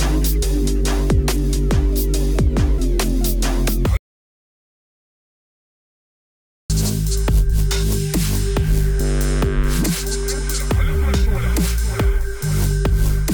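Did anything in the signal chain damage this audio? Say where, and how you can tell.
Yes. From 3.97 s to 6.70 s the sound cuts off mid-flow and drops to silence for about 2.7 s, with no room tone underneath, then resumes abruptly. This audio dropout to silence likely came from the input device or link disconnecting while the recorder kept writing silence.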